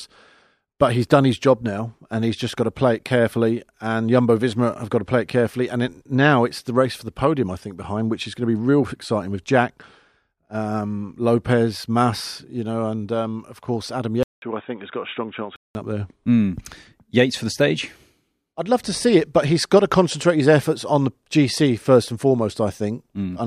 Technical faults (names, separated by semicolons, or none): input switched to a poorer device